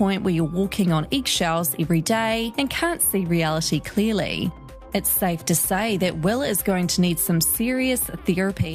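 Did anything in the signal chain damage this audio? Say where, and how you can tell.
No, nothing in the chain.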